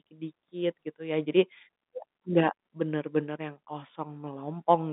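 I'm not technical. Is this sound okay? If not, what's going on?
Yes, the recording is in good technical shape; it has the narrower sound of an ordinary landline call, with nothing above about 3.8 kHz, which is normal for telephone audio.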